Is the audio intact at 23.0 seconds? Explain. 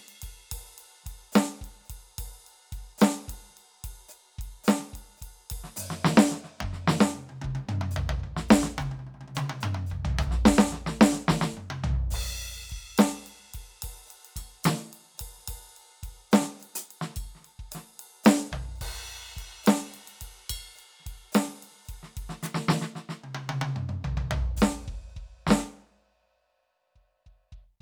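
Yes, the music plays through 23.0 seconds with no audible fault at that moment.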